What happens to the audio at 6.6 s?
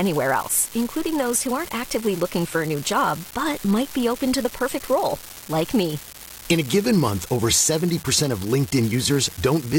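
At 6.6 s the speech carries a steady crackling fizz, present there as it is across the whole clip and continuing through pauses. It is an unreliable data bit: one marginal data line flips at random, each error adding an identical spike of about -19 dBFS.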